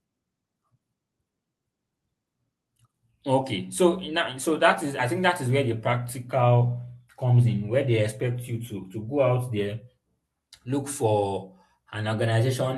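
No technical faults are audible.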